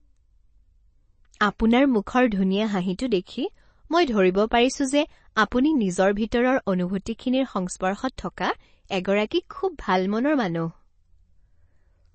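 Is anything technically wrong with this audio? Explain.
Yes. Throughout, nothing reaches above 8.3 kHz and the speech sounds watery. The likely cause is MP3 compression, pointing to a low bitrate near 32 kbps.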